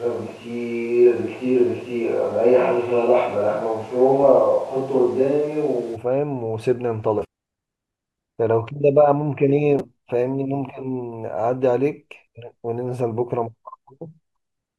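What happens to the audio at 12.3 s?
Damaged data in a compressed stream hits at 12.27 s as a single, very brief event in the speech. At that point some of the encoded bytes were lost, zeroed, overwritten or mixed with unrelated data. The decoder cannot read the affected frame correctly, loses sync, and scans ahead for the next valid frame header before resuming. What you hear is a chirp, squawk, click or short hole in the speech.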